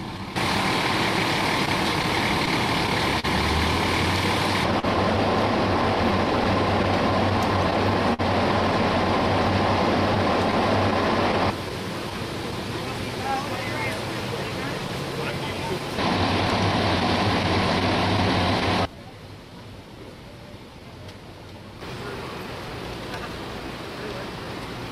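The sender's clock runs about 3 percent slow against the receiver's. This is clock drift between sender and receiver, and it lasts the whole clip. Because packets arrive a little slower than they are played, the jitter buffer keeps draining. That causes the timing slips described below. What separates drift from ordinary network trouble is that its fixes all push the same way, toward adding time, and they never stop.

The first result is scattered short gaps, heard at 1.19 to 3.25 s, 6.11 to 8.21 s, 10.15 to 12.13 s and 17.00 to 18.63 s. Each stretch has a handful of tiny holes, around seven in the first three and about five in the last. The receiver patched each one by carrying the previous sound forward, so they come across as brief ticks or smears. None of them is longer than a few tens of milliseconds. They differ from a stall because they are many small, separate patches spread across a stretch, not one held moment.

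The short stall from a late packet comes at 4.79 to 4.85 s. A packet missed its slot, so the receiver stretched the last sound for about 36 ms and then carried on where it left off. Nothing is lost. The sound is just held a bit too long, with a slight buzz or dip. Unlike the scattered gaps, this is one isolated event, and after it the playout delay is about 36 ms longer.

Repeated timing corrections run from 12.27 to 15.80 s and from 18.87 to 24.78 s. Here the receiver keeps repeating short pieces so that it plays at about 97 percent speed, which lets the slow sender keep up. This adds roughly a tenth of a second in the first stretch and somewhat more in the second. The edits come at uneven intervals and, if heard at all, come across as slight hiccups or a slightly unsteady tempo. They are not heard as a clear pause or dropout.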